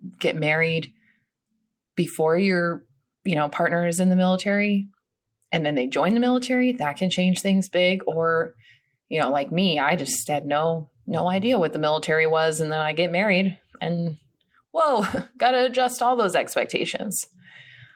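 No technical faults can be heard anywhere in the recording.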